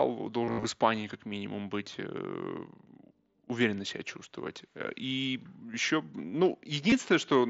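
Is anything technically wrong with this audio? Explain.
Yes. From 0.45 to 0.64 s the sound turns buzzy and tonal in bursts, with a warble each time real audio resumes, and a brief blip recurs at 6.90 to 6.92 s. This is concealed Bluetooth headset packet loss. Roughly 140 ms of the first stretch went missing, the longest gap about 60 ms, and the receiver filled each hole by repeating the closest-matching recent waveform, held at full level. The mSBC headset codec's band-limited sound is audible throughout.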